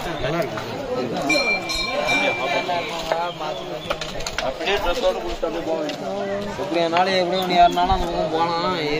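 No technical fault can be heard anywhere in the audio. There is no point in it that calls for a time stamp or a measured value.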